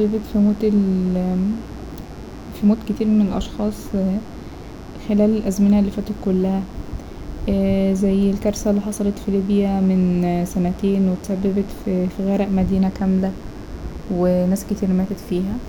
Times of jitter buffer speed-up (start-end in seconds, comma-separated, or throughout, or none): none